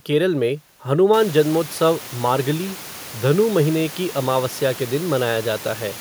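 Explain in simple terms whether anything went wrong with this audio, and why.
Nothing went wrong with this audio. About a second in, the background noise of the room gets noticeably louder, but it stays well below the speech and is simply part of the room where the recording was made, not a problem with the equipment.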